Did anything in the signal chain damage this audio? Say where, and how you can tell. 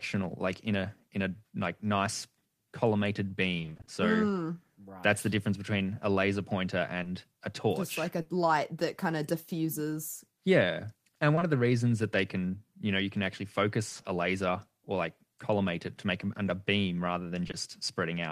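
Yes. The damage comes from the network. Two bursts of repeated packet loss give a robotic sound. The first runs from 3.57 to 3.89 s. It has eight gaps, each up to 20 ms. Half that stretch, 160 ms, is patched. The second runs from 13.89 to 14.05 s. Four gaps cover half of it, 80 ms. The decoder stretches the last sound into each hole. The holes come so close together that the sound turns choppy.

There is also short concealed packet loss. It hits at 7.03 to 7.07 s, at 8.21 to 8.27 s, at 11.35 to 11.43 s and at 17.47 to 17.55 s. Each dropout is 20 or 40 ms. That points to 20 ms packets. Each is heard as a brief smear or wobble. The receiver fills each hole from the preceding sound, then fades back into the real signal. A short sound inside a hole can disappear.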